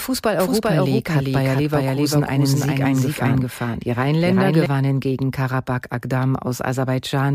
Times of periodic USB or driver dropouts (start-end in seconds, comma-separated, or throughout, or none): none